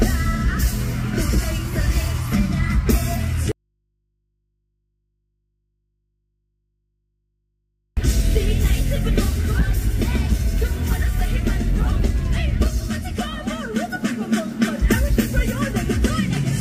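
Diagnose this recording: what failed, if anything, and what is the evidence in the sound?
Audio dropout to a faint residue, 3.52 to 7.97 s: the sound cuts abruptly, leaving only hum about 50 dB down for 4.45 s, likely an intermittent analogue connection.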